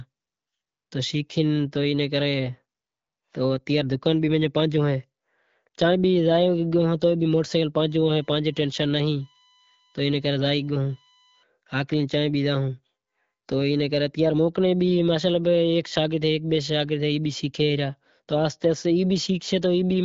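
From 7.80 to 11.43 s there's a USB whine sitting under the speech: a steady, fixed-pitch tone built on 1 kHz, though the third harmonic at 3 kHz is the part that really stands out. That's the bus drawing current in 1 ms frames, with the ripple getting into the audio path through shared power or ground. It's faint, roughly 35 dB below the speech, riding through the light AMR-WB coding at 12.65 kbit/s.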